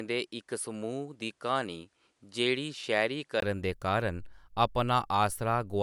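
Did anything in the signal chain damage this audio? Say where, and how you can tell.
Yes. The damage sits at the input stage, before any later processing. From the start to 3.42 s, the sound is band-limited, with nothing above 11.4 kHz. It is duller than what follows. At 3.42 s there is a 20 ms gap, then the full band returns just before "दे कारण". The level barely shifts, and the poorer part carries its own faint noise floor, well below the signal. This is likely an input switched to a poorer device mid-recording.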